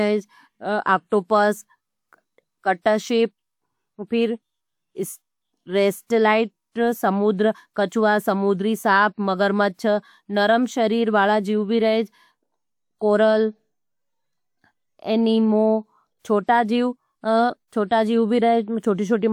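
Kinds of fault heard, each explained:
Nothing here stands out as a technical fault; the speech just comes through as it is.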